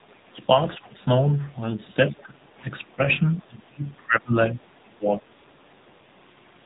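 Throughout, the AMR narrowband mobile codec confines the speech below 4 kHz and leaves a plainly buzzy, synthetic texture. That points to a low mode near 7.4 kbps, not just a simple band limit.

From 2.90 to 2.95 s a faint second voice, around 35 dB under the talker, is the other side's voice leaking through. The likely cause is an echo canceller letting residual loudspeaker sound pass. It is an added voice, not a dip.

At 2.96 to 3.00 s the talker drops by roughly 10 dB. From 3.42 to 5.26 s it sinks in pieces, for about a second in total and by up to some 25 dB. This is speech suppressed in double talk, likely the canceller ducking both sides at once. It reads as gated loss rather than dropped packets.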